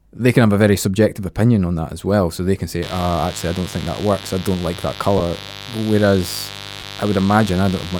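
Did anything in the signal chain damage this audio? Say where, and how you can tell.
Yes. In the analogue wiring, a raspy mains buzz enters at 2.83 s and runs to the end, roughly 15 dB below the speech. Unlike smooth hum, its 50 Hz harmonics reach into the kHz range, pointing to switching spikes.

In the Bluetooth link, lost LE Audio frames occur at 5.18 s (20 ms) and 6.80 s (30 ms), which fits two and three 10 ms frames. The LC3 concealment reuses the last spectrum, so these sound like brief noisy smears rather than the silent gaps or clicks of buffer dropouts.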